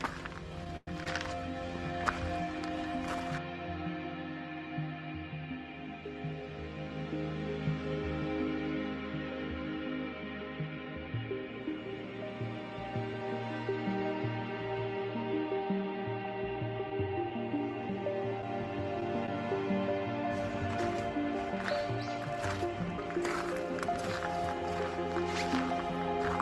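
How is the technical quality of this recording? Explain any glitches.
The recording has two network glitches. Both come from the call path, which carries the audio through an Opus-style codec with the top end ending near 12 kHz.

From 0.64 to 1.07 s there are repeated stalls (stutter). Packets arrived late, so the jitter buffer ran dry three times. Each time, the receiver stretched the last sound to fill the wait. Together these fills add 133 ms, about a third of that stretch. The longest is 104 ms. Nothing is lost. The sound drags and stumbles briefly.

From 16.90 to 19.28 s there are scattered short gaps. About five packets went missing, one at a time. The receiver patched each hole by continuing the sound just before it. Each patch is short, the longest around 15 ms. About 40 ms of audio is gone in total. Because each patch is so short, they come through as brief ticks and smears.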